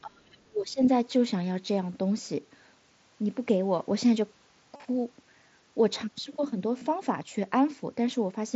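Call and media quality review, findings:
Speech suppressed in double talk, 0.01 to 0.8 s. Level dips by up to about 30 dB, chopped and dull across roughly 0.7 s. Probable component: echo canceller. Likely cause: far end talking simultaneously, canceller attenuating near-end speech with the echo.

Concealed Bluetooth headset packet loss, 4.76 to 4.84 s. 60 ms missing, spread over 75 ms, longest gap 37.5 ms. Brief buzzy held tone, slight warble on recovery. Fits eight lost headset frames patched from recent waveform.

Concealed Bluetooth headset packet loss, 6.78 to 6.82 s. 30 ms gap, short repeated-tone fill. Fits four lost frames. Headset link on mSBC wideband codec, light grain on loud passages.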